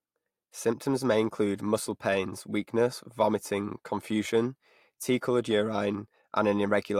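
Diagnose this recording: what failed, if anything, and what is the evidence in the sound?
Nothing in the speech signal points to a failure at any stage of the chain, from capture through conversion, processing, transmission and storage to playback.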